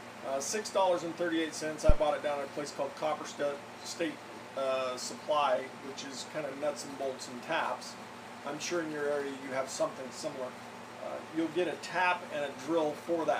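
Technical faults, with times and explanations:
1.89–2.00 s, phantom power thump: a single deep thud peaking at about −8 dBFS and decaying within 23 ms, as a supply switched on or off on the live input sends a voltage step through the coupling capacitors. Unlike a handling bump, it carries no rustle or mechanical rumble.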